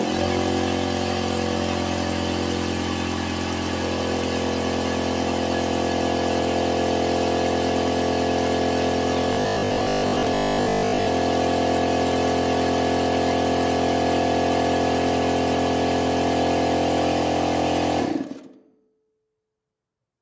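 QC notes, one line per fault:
9.33–11.07 s, robotic sound from repeated short buffers: most of this stretch collapses into a rigid, metallic 50 Hz buzz. New audio was likely arriving too slowly, so one short chunk kept looping, and a 50 Hz repeat fits roughly 20 ms chunks.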